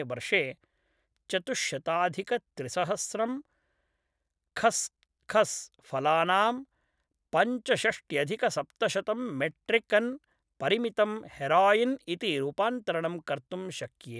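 Nothing in the recorded speech signal shows a technical fault at any point.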